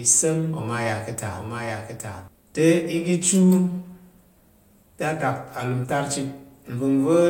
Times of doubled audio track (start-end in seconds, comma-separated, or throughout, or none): 0.00-2.28